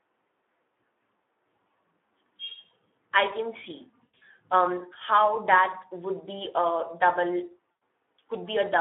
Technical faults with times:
0.00-8.80 Speex codec
4.06-4.23 VoIP packet loss concealed by the speech codec
7.71-7.81 VoIP packet loss concealed by the speech codec

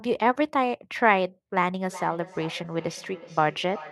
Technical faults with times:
1.89-3.91 feedback echo between two devices

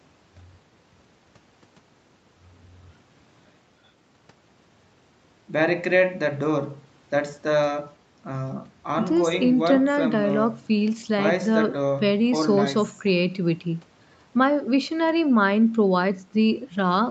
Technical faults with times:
none

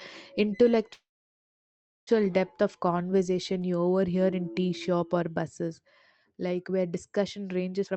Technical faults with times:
0.93-2.09 call audio freeze
7.84-7.96 jitter buffer speed-up

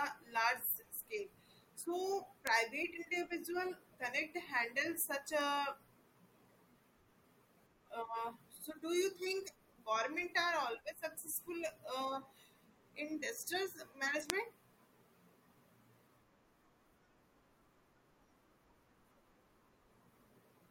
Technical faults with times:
2.47 bit error spike
5.41 bit error spike
14.30 bit error spike

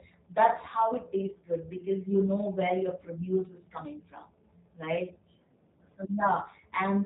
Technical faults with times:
0.00-7.06 G.729 codec

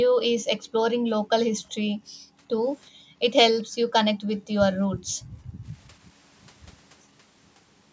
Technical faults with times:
0.08-0.82 background gated by the echo canceller
1.47-2.41 background gated by the echo canceller
2.91-3.19 background gated by the echo canceller
3.59-3.63 echo leak
3.64-3.87 background gated by the echo canceller
4.15-4.53 background gated by the echo canceller
4.87-5.66 background gated by the echo canceller

